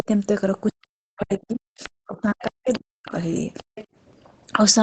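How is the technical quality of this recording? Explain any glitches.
The recording has two call-related glitches: the talker is repeatedly pushed down, and a second, fainter voice breaks through. Everything sits under 8 kHz, consistent with a wideband call codec such as Opus at a modest bitrate.

Speech suppressed in double talk: a brief dip at the very start, 0.0 to 0.08 s, of about 30 dB; a long stretch from 0.72 to 3.14 s, where roughly one and a half seconds in total are pulled down by as much as about 40 dB; and a short hole of about 40 dB from 3.62 to 3.75 s. The likely cause is that the far end was talking at the same moment, so the echo canceller could not tell the local talker from the loudspeaker return and attenuated everything. The voice dips, loses its high end or cuts out in pieces.

Other side's voice leaking through: short scraps at 1.3 to 1.38 s and 1.83 to 1.89 s, a longer run from 2.3 to 3.08 s, and another from 3.57 to 3.86 s. 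They sit about 15 to 20 dB below the talker. This is likely loudspeaker sound picked up by the microphone that the echo canceller did not fully cancel. It sounds detached, a second voice rather than a reverberant tail of the talker's own words. Those words would follow the talker's rhythm, while the leak follows its own.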